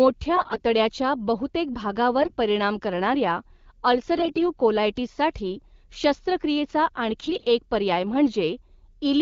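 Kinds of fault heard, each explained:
AMR bit errors: Some of the less protected bits in the coded frames arrived flipped. The frames still passed their check and were decoded. Excitation pulses land in the wrong places, and the fine pitch, gain and spectral values drift. The speech keeps its rough pitch and level but turns hoarse and gargly in four short bursts: 0.36 to 0.62 s, 2.22 to 2.36 s, 4.16 to 4.46 s, and 7.23 to 7.46 s, just before "एक पर्याय".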